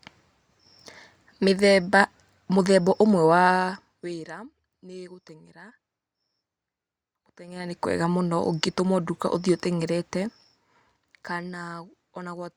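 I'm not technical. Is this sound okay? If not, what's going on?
No. There is zipper noise from 7.44 to 7.8 seconds, just before "kwega mũno ũngĩtũmwo nduka". The volume jumps by a large amount there, but instead of gliding it moves in small, sudden steps, about thirty each second. Every step leaves a tiny click, so you hear a brief ticking or zipping sound riding on the speech while the level moves.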